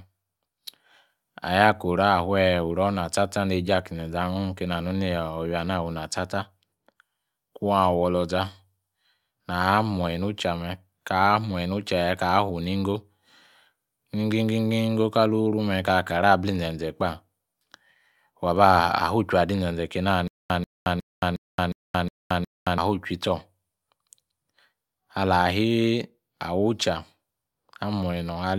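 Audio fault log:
20.28–22.78 s, stutter with silent gaps: the same 140 ms scrap of speech comes back seven times, each followed by about 221 ms of dead digital silence, so it ticks along every 361 ms. Likely a stalled stream replaying its last fragment on each retry, with the real audio lost.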